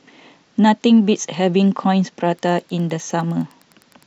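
From 2.31 s to the end of the speech, a faint, steady ticking about ten times a second sits far below the voice. This is Wi-Fi interference: a nearby radio's beacon, repeating every 102.4 ms, is being picked up and rectified by the audio circuit.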